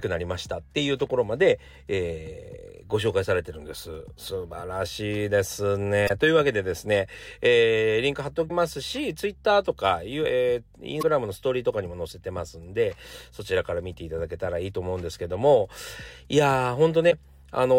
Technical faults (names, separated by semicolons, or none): damaged data in a compressed stream